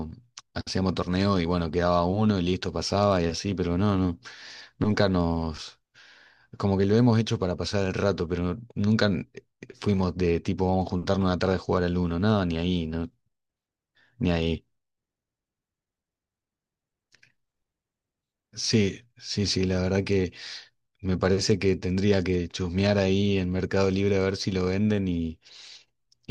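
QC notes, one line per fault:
0.12–26.3 s, clock slip clicks: a steady soft rattle running under the speech, about one single-sample slip every 40 ms. Two free-running clocks around 500 ppm apart likely drop or repeat a sample each time the gap builds to a whole sample. Nothing to hear in the gaps.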